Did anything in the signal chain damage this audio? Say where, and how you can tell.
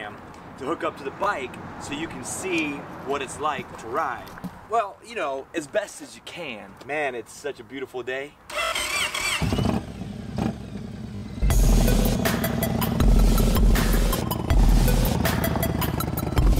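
Yes, at the driver/buffer stage: a repeated buffer at 1.24–1.26 s and 4.42–4.44 s (one repeat each), then 8.64–8.72 s (four) and 11.16–11.22 s (three), heard as hard-edged stutters. Audio arrived late, so the last block, which fits a 20 ms buffer, replayed in its place.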